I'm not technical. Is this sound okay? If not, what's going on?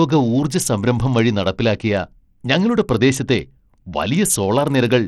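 No. All the way through, this speech has a gritty, grainy edge and dull, unsteady treble, which points to likely Bluetooth SBC compression. Unlike a simple muffled recording, the top end flickers in and out and leaves rough noise behind.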